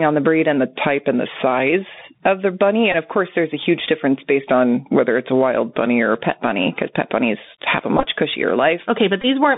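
This speech clip carries a narrowband Bluetooth CVSD headset codec sound throughout. Everything sits between about 150 Hz and 3.7 kHz. Nothing higher gets through. The damage is plainly audible. S sounds turn scratchy, and loud high sounds outrun the adaptive step and distort. A grainy hiss lies under the speech. This one-bit delta coding fits a 64 kHz CVSD link.

Gain pumping also runs through the whole clip. The gain swings by around 15 dB. Loud and soft parts end up squashed together. The likely cause is gain set far too high, with a fast limiter clamping it back on every peak.

There are two drift correction steps. The first runs from 0.58 to 1.70 s, between "on the breed and" and "of the bunny". The second runs from 4.50 to 6.15 s, between "a huge difference based" and "a pet bunny because". Each time the audio slows by 5.87% and drops 105 cents, about a semitone. This is likely a clock-matching rate change made to manage a buffer.

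Bluetooth headset packet repeated faults occur three times. The first is at 2.92 to 2.95 s, the second at 7.97 to 8.07 s just after "pet bunnies have a", and the third at 9.22 to 9.26 s. At each point lost packets were replaced by re-decoding the previous packet. The repeats recur every 3.75 ms and give a brief buzz near 267 Hz. The middle event is spread over about 90 ms. Its longest run is roughly 15 ms.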